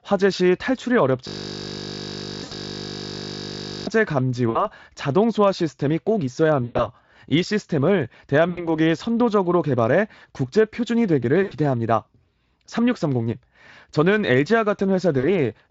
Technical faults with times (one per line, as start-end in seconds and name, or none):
1.27-3.87 system hang loop
2.43-2.54 VoIP packet loss concealed by the speech codec
4.49-4.68 VoIP packet loss concealed by the speech codec
6.63-6.88 VoIP packet loss concealed by the speech codec
8.49-8.70 VoIP packet loss concealed by the speech codec
11.43-11.53 VoIP packet loss concealed by the speech codec
15.19-15.27 VoIP packet loss concealed by the speech codec